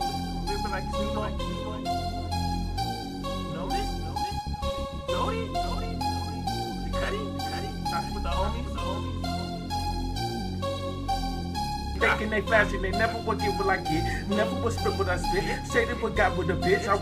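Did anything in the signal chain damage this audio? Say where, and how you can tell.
Yes. Two isolated clicks, at 13.06 s and 14.08 s, point to dropped samples, likely from a driver or buffer stage that briefly lost its place. At each point a fraction of a millisecond of the stream is missing, so the waveform jumps abruptly from one value to a later one and no sound is lost. On a waveform that shows as a sudden step, and on a spectrogram as a thin vertical line across the full frequency range.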